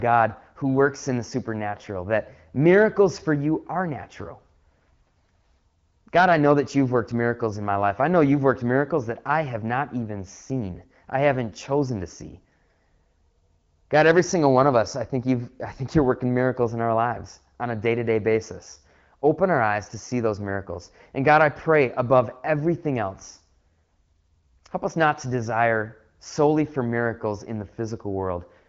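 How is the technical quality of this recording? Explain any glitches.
The speech shows no faults, only the band-limited character of AMR wideband (HD Voice) coding, with nothing above about 7.3 kHz and a light coding texture that fits the 12.65 kbit/s mode.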